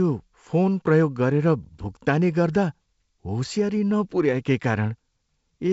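No faults can be heard in this speech, which comes through G.722 wideband telephone coding with a light coding grain that fits its 56 kbit/s mode, and with the band ending at 7.7 kHz.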